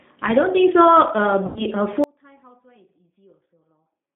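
The whole clip runs through the G.729 codec, squeezed into an 8 kbit/s phone band of about 200 Hz to 3.7 kHz, so the speech sounds plainly rough and synthetic. At 1.46 to 1.66 s there's VoIP packet loss concealed by the speech codec. About 100 ms went missing, which fits five 20 ms packets, and the decoder stretches the last sound out and fades it before recovering. From 2.04 s to the end it's an audio dropout to a faint residue, most likely a lost signal on a path that stayed open. The speech cuts out abruptly, leaving only a faint trace far below normal level.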